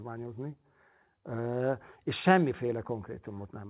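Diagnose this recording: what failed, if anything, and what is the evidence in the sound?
A short stall from a late packet hits the network and jitter buffer stage. At 2.66 to 2.71 s, one speech sound is held about 25 ms too long, with a slight buzz or dip. The buffer ran empty, so the receiver stretched that sound until the packet arrived. Nothing is lost. Playback then runs 25 ms later.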